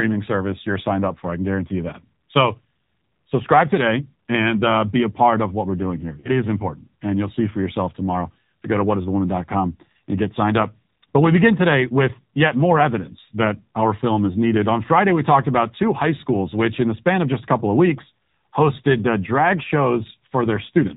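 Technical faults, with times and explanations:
Throughout, AMR narrowband mobile codec: the speech has been squeezed through AMR-NB at what sounds like around 7.4 kbps, and the damage is plainly audible. Everything above 4 kHz is simply gone, so it's got that boxy phone-line feel, and at this low rate the codec's vocal tract model can't keep up, leaving the voice buzzy and a bit synthetic, like a rough reconstruction of speech rather than the real thing.
6.20 to 6.31 s, lost AMR speech frames: there's a short hiccup here, which fits about 40 ms of speech, roughly two frames, failing to arrive intact. The decoder patches the gap by repeating the last good pitch and vocal tract settings while turning the level down, so you hear a brief smeared, warbly dip instead of a clean dropout, and the voice comes back weak or rough for a moment afterwards.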